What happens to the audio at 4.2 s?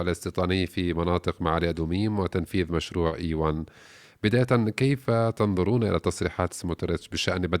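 Nothing goes wrong at 4.2 s; the audio plays straight through that point without any dropout, glitch or other fault.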